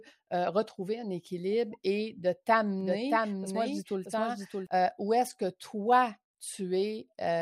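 A doubled audio track appears in this speech clip from 2.81 to 4.67 s, starting right after "un équilibre et de" and ending just before "euh où". A second, full-band copy of the speech runs around 0.7 s behind the original, roughly 5 dB quieter, with no decay or room colouring, and it cuts in and out abruptly. The likely cause is the signal being picked up again through a slower path or an edit leaving two offset copies.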